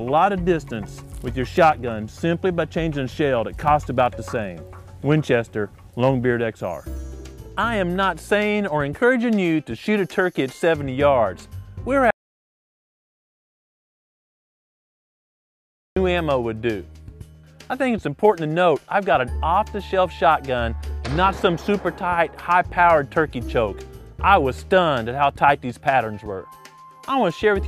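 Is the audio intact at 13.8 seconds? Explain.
No. At 13.8 seconds the sound is gone entirely: an audio dropout to silence runs from 12.11 s to 15.96 s, a gap of about 3.86 s. The audio cuts off abruptly and returns just as abruptly, and the gap in between is silent with no room tone or background hiss. The input was likely lost for that stretch, so the recorder kept writing silence, and whatever sounded during those seconds is unrecoverable.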